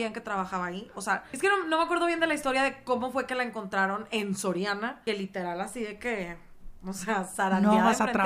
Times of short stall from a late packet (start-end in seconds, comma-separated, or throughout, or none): none